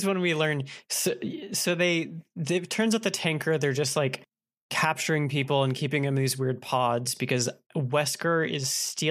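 Nothing in the speech stood out as a technical fault on listening.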